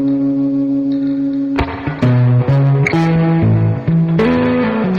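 Hard clipping appears three times. At 1.59 to 1.61 s a brief overload of about 4 dB flattens the peaks, heard as a short crackle. From 2.03 to 3.46 s the signal runs about 3 dB past what the stage can pass, so every peak in that stretch is cut flat and the sound takes on a sustained harsh edge. At 4.19 to 4.46 s an overload of about 4 dB adds the same high harmonic fuzz to the loud parts.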